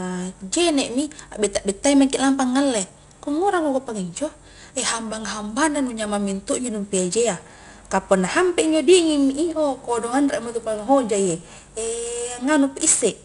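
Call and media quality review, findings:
4-bit ADPCM compression, whole clip: gritty hiss riding every loud syllable, nothing above about 10.6 kHz. Points to roughly 22 kHz sampling, 4-bit steps chasing the prediction.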